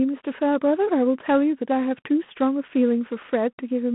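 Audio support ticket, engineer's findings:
G.726 ADPCM, whole clip. Speech narrowed to a 150 Hz to 3.4 kHz line band, nothing above 3.8 kHz. Harsh rasping hiss riding on the speech and swelling with its level, which fits 24 kbit/s rather than DECT's 32 kbit/s. Coarse per-sample difference coding raises quantisation noise. Unlike plain band-limiting, the grit is added. Unlike frame-based codecs, no warble or metallic smearing.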